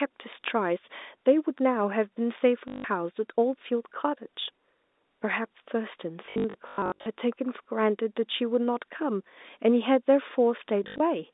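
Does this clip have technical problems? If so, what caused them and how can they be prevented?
Yes. Packet loss with last packet repeated causes robotic stutters at 2.68–2.84 s, 6.26–7.06 s and 10.84–11.0 s. Missing audio was refilled with the previous packet, buzzing near 50 Hz, which fits 20 ms packets. Better loss concealment, a deeper jitter buffer and a steadier network path would prevent it.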